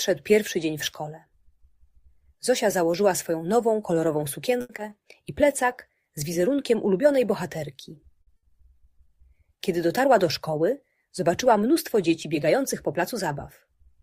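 At 4.61 s the first short stall from a late packet begins and runs to about 4.71 s. A packet missed its playout time, so the jitter buffer emptied and the receiver held the last sound for 80 ms until the data turned up, then carried on from the same point. Nothing is lost, but the sound at that spot is drawn out with a faint buzzy sustain, and playback now sits 80 ms later than before.

From 4.77 to 4.90 s there is a short concealed packet loss. About 20 ms of audio never reached the decoder, and the receiver bridged the hole with 10 ms of synthesised continuation before crossfading back to real audio. The result is a brief smear or wobble, and anything very short falling in that 20 ms is gone. The stretch ends up a little longer than the original.

A second short stall from a late packet occurs at 8.22 to 8.29 s. It is the same mechanism with a 50 ms hold, heard as a momentary sustained, slightly buzzy sound and a further 50 ms of added delay.

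Right after, from 8.37 to 8.50 s, comes a burst of packet loss. Roughly 60 ms of consecutive audio was lost. The receiver extended the preceding sound for 60 ms, fading it as the gap continued, so it comes across as a decaying buzz or hiss. The audio then resumes past the missing section, with that 60 ms skipped.

Between 12.27 and 13.14 s the jitter buffer speed-up occurs. Excess audio had built up in the buffer, so the receiver trimmed short pitch-period pieces repeatedly to bring the delay down, removing around 40 ms in total. Playback runs at about 104% of normal speed with unchanged pitch.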